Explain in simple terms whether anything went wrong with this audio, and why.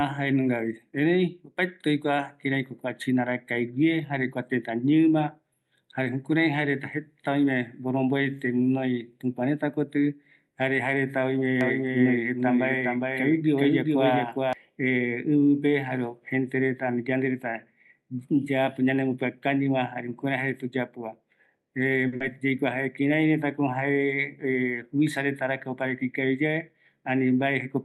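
Doubled audio track, 11.6 to 14.5 s: the speech is heard twice, with a second copy a little quieter and almost half a second behind, starting and stopping abruptly. The likely cause is the same sound being captured again through a slower route and mixed back in.

Short stall from a late packet, 22.07 to 22.15 s: one piece of the call arrived late, so the receiver held the last sound for about 50 ms while it waited. Nothing was lost, but the sound hangs on slightly too long.

Short concealed packet loss, 22.16 to 22.23 s: about 40 ms of speech never arrived. The receiver covered the gap by extending what came just before, then blended back into the real audio, giving a brief smear where that small bit of speech is gone.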